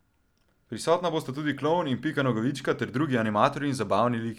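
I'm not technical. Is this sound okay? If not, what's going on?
Yes, nothing in this speech recording points to a technical fault, so there is nothing to fix.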